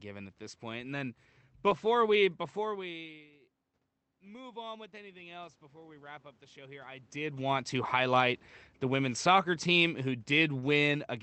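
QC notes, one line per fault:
1.65–1.67 s and 1.69–1.71 s: lost packet rebuilt from error correction. Two 20 ms stretches sound rougher and noisier, with no gap. Each lost packet was replaced by the low-bitrate copy carried in the next Opus packet, so the decoder filled the hole with coarser audio.
4.06–7.14 s: automatic gain rising. The level climbs about 7 dB over roughly three seconds. The input had dropped by about 22 dB, partly as the talker moved away, so the gain control slowly raised its gain. Voice and room noise swell together.
8.83–11.07 s: automatic gain falling. The sound sinks by about 4 dB over about two seconds. The gain control judged the input too loud, or its background noise too strong, and lowered its gain gradually, pulling the voice and background room noise down together.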